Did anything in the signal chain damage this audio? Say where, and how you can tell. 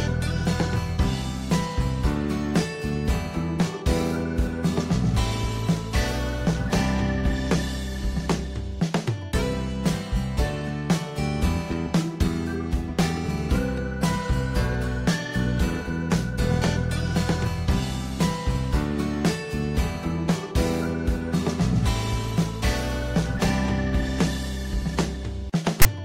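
Yes. At the storage and playback stage, file tags are played as audio from 25.82 to 25.85 s: a block of text metadata is read as samples, giving a hard-edged burst of loud rasp pushed to one side. A single click would be shorter, and this burst is too buzzy to be compressed-data noise.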